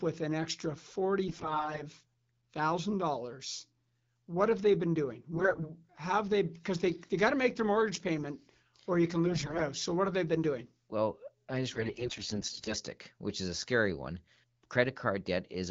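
AMR bit errors hit at 1.28 to 1.83 s, 5.34 to 5.70 s, 9.26 to 9.66 s and 11.73 to 12.75 s. Weakly protected frame bits arrive flipped. Pulses land wrongly and pitch, gain and spectrum values drift. Pitch and level hold, but speech turns hoarse, scratchy and gargly.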